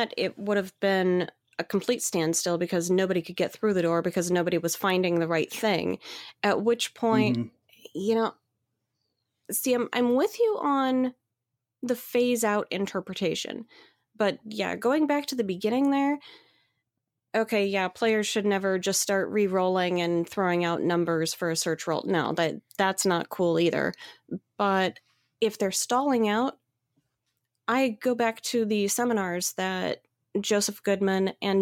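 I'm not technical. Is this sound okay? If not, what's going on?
Yes, no faults to hear.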